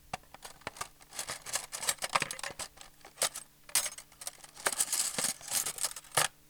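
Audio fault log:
No faults are heard in this recording of sounds. Nothing in it calls for a timed entry.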